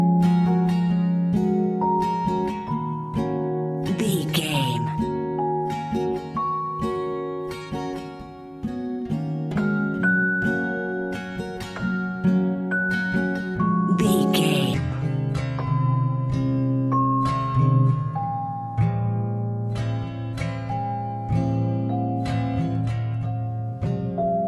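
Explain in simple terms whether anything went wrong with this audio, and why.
From 14.74 s to the end, the sound turns slow and low. This is a wrong sample rate fault. The audio plays back slower than it was recorded, so everything runs at 0.73 times normal speed and drops 5.6 semitones in pitch.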